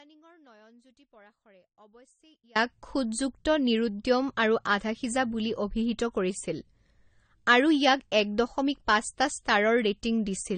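A speech recording that was likely encoded twice in a chain of lossy codecs, first as MP3 and then re-encoded as AAC-LC, carries transcoding between lossy codecs through its whole length. The second encoder spent its limited bits reproducing the first one's artefacts and added its own coding noise on top, so both sets of artefacts sit together in the sound. Nothing survives above 9 kHz, and the layered texture fits a modest MP3 rate followed by a lower AAC-LC rate. From the start until 2.55 s there is also an audio dropout to a faint residue, which is likely a signal path that lost its input while the stages after it stayed live. The clip opens already inside the gap, where only a faint leak of the speech remains, roughly 30 dB below its normal level. At 2.55 s the full signal returns abruptly, with no fade-in.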